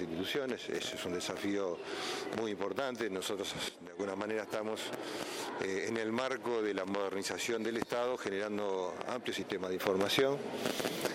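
At 3.69 s the level drops by about 12 dB and the background falls with it, then comes back at 4.0 s. At 9.80 s it jumps up about 6 dB and stays there. Both look like a sudden gain jump, likely a gain change applied without a ramp.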